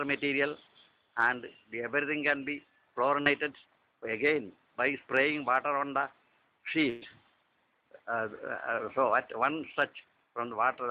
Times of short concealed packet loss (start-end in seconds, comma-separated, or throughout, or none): 3.21-3.27